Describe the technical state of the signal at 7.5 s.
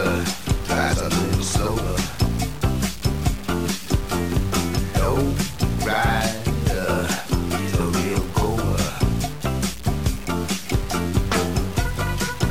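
Low bit depth without dither is present at 7.5 s and throughout the clip. The likely cause is truncation to very few levels, which fits about 5 bits, so the error tracks the signal, giving grainy distortion roughly 20 dB below it that grows harsher as the sound quietens.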